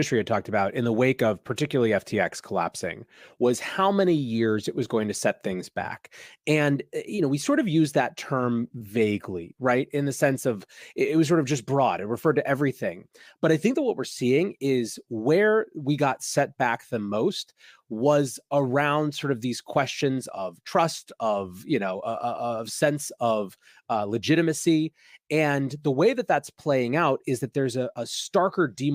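No technical fault can be heard anywhere in the speech recording, and the signal stays continuous and intact throughout.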